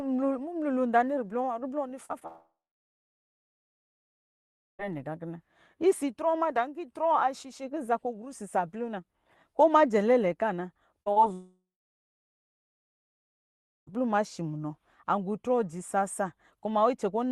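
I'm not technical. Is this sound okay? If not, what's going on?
No. There are brief glitches: tiny smears or wobbles in the speech at 2.05, 2.19, 11.03 and 11.12 seconds, each lasting a few hundredths of a second. This is short concealed packet loss: small pieces of the call arrived too late, so the receiving end papered over each gap by stretching the sound just before it.

The bigger problem is two long gaps. At 2.27 seconds the sound trails off into a fading buzz or hiss, then goes quiet until 4.81 seconds, when it resumes at "nɛ gakina". The same happens from 11.33 to 13.89 seconds, picking up again at "ma shi munɔ". Each is a long network dropout, likely caused by the connection stalling, and about two and a half seconds of speech is simply missing.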